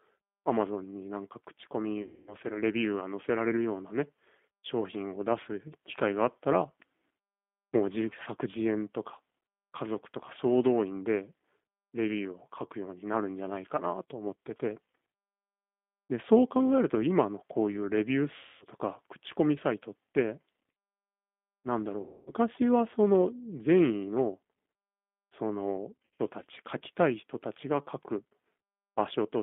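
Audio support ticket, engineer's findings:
G.729 codec throughout. Band limited to 200 Hz to 3.5 kHz. Rough, synthetic speech texture, plainly audible, from 8 kbit/s pulse-based reconstruction.

VoIP packet loss concealed by the speech codec at 2.02–2.35, 18.36–18.65, 22.01–22.32 and 26.05–26.21 s. Stretched, fading extrapolated sound, weak recovery. Gaps fit about 250 ms lost, the last 130 ms scattered.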